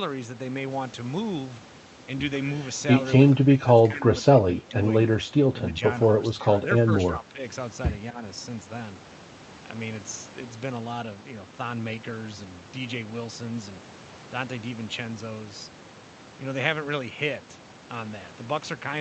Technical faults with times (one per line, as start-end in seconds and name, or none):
3.43-4.74 speech suppressed in double talk
5.69-5.81 speech suppressed in double talk
6.19-6.62 speech suppressed in double talk
7.12-7.42 speech suppressed in double talk
8.11-8.22 speech suppressed in double talk